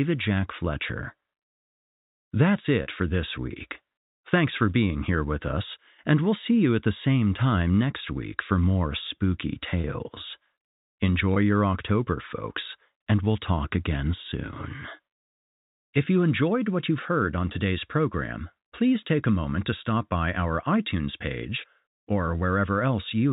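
At 2.83 to 2.86 s, 9.81 to 9.84 s and 11.34 to 11.36 s, the sound briefly freezes into a held, buzzy tone: packet loss with pitch repetition. Gaps of 30, 30 and 20 ms, which fit 10 ms packets, were bridged by looping the last pitch period. In the waveform, each gap shows repeated cycles that fade in level. On the spectrogram, the harmonics run flat and unchanging across the gap, all below the 4 kHz ceiling of the G.711 telephone coding.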